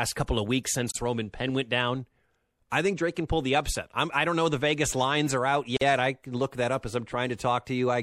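Across the whole speech clip the high detail sounds watery and swirly, with metallic chirps on s sounds and softened consonant attacks. This is likely MP3 compression at a low bitrate, plausibly around 64 kbps. On a spectrogram weak components flicker on and off as scattered holes from frame to frame.

From 0.91 to 0.95 s, a gap at a join of encoded pieces cuts the speech with a gap of about 46 ms. The speech then resumes from exactly where it stopped. The same fault returns from 5.77 to 5.81 s, lasting about 47 ms. Each piece was evidently encoded on its own, and the encoder's start-up delay and padded final frame were never trimmed before joining. On the waveform each gap is a flat dropout with steep but slightly smeared edges. On a spectrogram it is a narrow vertical blank band across all frequencies.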